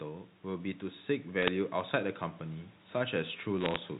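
Bit errors on the digital phone line show up from 1.42 to 1.48 s and again, denser, from 3.58 to 3.76 s: flipped bits corrupt single samples, giving brief sharp ticks and crackle.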